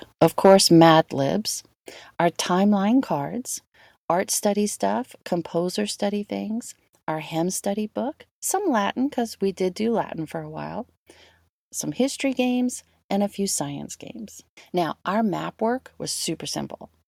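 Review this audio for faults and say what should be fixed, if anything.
From 0.22 to 0.84 s the loudest syllables sound crackly and flattened at the top. The peaks appear squared off, as if the signal ran about 3 dB past what the input could handle. Around 2 percent of the samples in that stretch look cut. The likely cause is microphone overload: the input volume was set too high, so the converter hit its ceiling and sliced off the tops of the waveform. To prevent it, lower the microphone input gain before recording.

At 1.02 s the whole signal drops by about 6 dB in a single step. Voice and background fall together. At 3.03 s it drops again, by about 3 dB. The first drop comes shortly after the distorted passage ends. This pattern likely points to the microphone volume being stepped down: call software sensed an input that was too hot and cut the device level abruptly. To prevent it, turn off automatic microphone gain adjustment and set a fixed, safe level.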